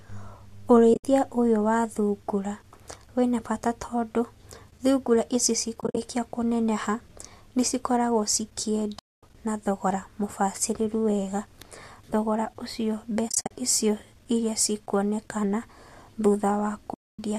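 Speech, broken by five soft-edged holes from AAC frame loss with muting: 0.94–1.04 s, 5.81–5.97 s, 8.99–9.23 s, 13.29–13.51 s and 16.94–17.19 s. The decoder zeroes the lost frames. The sound fades out and back. The short frames likely point to low-delay AAC.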